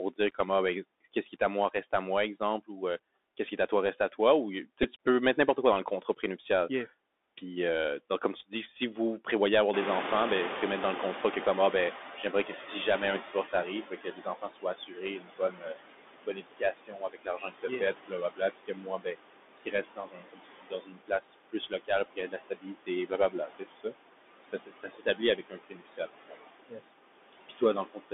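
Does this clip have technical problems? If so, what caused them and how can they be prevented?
Yes. There are five kinds of fault.

Noise suppressor artifacts run through the whole clip. The suppressor lowers frequency bands it judges to be steady noise by about 20 dB, frame by frame. The background drops away between phrases and comes back under the speech, leaving a fluttering, watery residue and a thinned voice. Because each band is gated separately and the gating changes from frame to frame, the remaining noise moves instead of sitting as a steady bed. Prevention: reduce the room noise at the microphone and use milder suppression or turn it off.

The Bluetooth CVSD headset codec is also present throughout. The audible band runs from about 250 Hz to 3.6 kHz, so the sound is plainly narrowband, with scratchy sibilants and a granular hiss under the speech. This fits the 64 kbit/s one-bit-per-sample CVSD link used in headset mode. 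Its adaptive step size cannot follow fast, loud high-frequency content, which causes slope-overload distortion on those sounds. Prevention: record over a wideband link such as mSBC or LC3, or use a wired microphone.

Speech cut by the noise suppressor happens three times. The first is between 1.14 and 2.7 s, after "dire comment ah ben" and before "ou euh". There the soft parts are swallowed, totalling around 150 ms and dropping by up to about 15 dB. The second is from 12.17 to 12.51 s, where roughly 100 ms is lowered by up to about 9 dB. The third and largest runs from 13.21 s to the end: about 7 s of low-level speech is lowered, by up to about 22 dB. In each case the suppressor classified quiet consonants and word endings as noise. Prevention: use a less aggressive suppressor with a speech-presence detector.

Bluetooth headset packet repeated occurs from 4.83 to 4.85 s, just before "peux mettre n'importe quoi", and again at 22.05 s. 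Each time about 11 ms of audio is replaced by the previous packet decoded again, which fits three lost packets. The result is a short buzzy tick as the same few milliseconds of audio repeat. Prevention: keep the headset close to the phone, away from body shielding and 2.4 GHz interference.

Noise suppressor catching up appears from 9.73 to 14.44 s, starting after "si vous prévoyez avoir". The room noise itself rises by about 24 dB at around 9.5 s. That rise is a real feature of the room, not a fault. The suppressor's noise estimate lags behind it, so the noise first comes through with little reduction and then fades over about 4.7 s as the estimate settles at about 16 dB of reduction. Prevention: use a suppressor with faster noise tracking, or avoid sudden changes in background noise.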